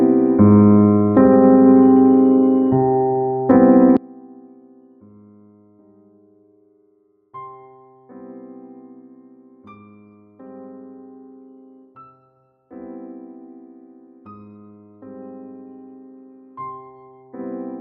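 From the very start there's gain pumping, with the level swinging by roughly 5 dB. Loud and soft moments sit closer together than they should, so everything feels squashed. The likely culprit is input gain set far too hot, with a fast limiter or compressor clamping down on each peak and letting go again in the pauses.

At 3.97 s the sound suddenly drops by about 29 dB and stays that way right through to the end. What's left is faint. That points to one channel inverted: with one side's polarity likely flipped, summing to mono cancels everything the two channels share, leaving only the small difference between them.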